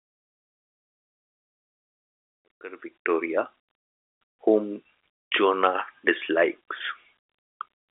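No technical faults can be heard: the audio sits in a telephone band with nothing above 3.7 kHz, as G.711 mu-law coding at 64 kbps would give, and the level rises in a smooth fade that is complete by 3.56 s.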